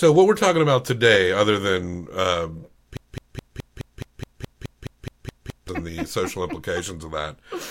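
From 2.97 to 5.69 s the speech falls into a broken-record loop: a 211 ms fragment repeats exactly 13 times, likely from a stalled player or stream, and the intended audio is lost.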